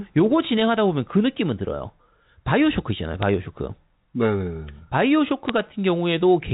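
At 3.23 s and again at 5.48 s, bit errors on a digital phone line cause sharp ticks. A few bits flipped on the G.711 line, each corrupting a single sample. The error rate is tiny, so these are isolated clicks rather than steady crackle.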